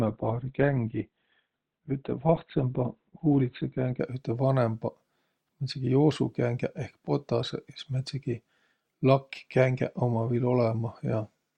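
Adaptive stream starting at a low bitrate, 0.0 to 4.0 s: thin, smeared treble suggesting 12 kbit/s; then spectrogram gaplessly fills to 16.3 kHz.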